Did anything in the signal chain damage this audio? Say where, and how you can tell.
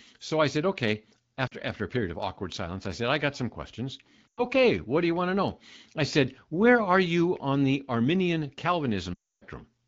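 Yes. At 1.47 to 1.53 s the speech dips and warbles briefly. From 4.28 to 4.43 s it drops to near silence. At 9.13 to 9.44 s it drops to near silence and returns weak or rough. These are lost AMR speech frames at the radio network stage. Errors failed the frames' checksums, so the AMR wideband (HD Voice) decoder repeated its last good pitch and vocal tract settings with falling gain, which fits gaps of about 40, 100 and 280 ms.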